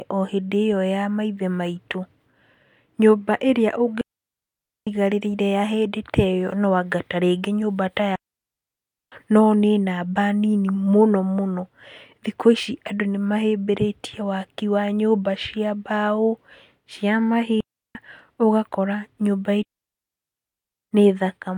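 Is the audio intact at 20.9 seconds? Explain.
No, 20.9 s falls right at the tail of a digital wireless dropout running from about 19.63 to 20.93 s. The link lost too much data, so the receiver muted for 1.3 s with a very quick fade, leaving a clean hole of near silence with no noise burst either side.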